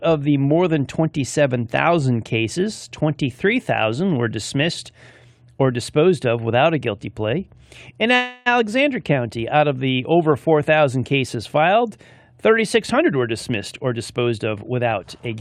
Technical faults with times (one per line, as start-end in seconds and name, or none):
8.15-8.48 call audio freeze
12.94-15.36 jitter buffer speed-up